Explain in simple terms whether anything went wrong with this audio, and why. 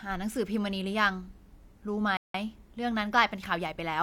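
Yes, something went wrong. At 2.17 s the speech cuts out to silence for about 170 ms, then picks up again at 2.34 s. That's a playback stall: the player most likely ran short of data or got held up briefly, so the sound just paused.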